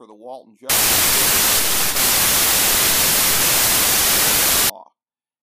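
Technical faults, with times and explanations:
0.70 to 4.70 s, samples built from the wrong bytes: the speech turns to loud, harsh broadband noise. Misassembled bytes make fast-changing low bits dominate each value.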